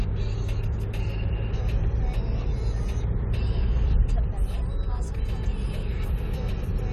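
No technical faults can be heard anywhere in these sounds. Nothing in the recording calls for a timestamp or further comment.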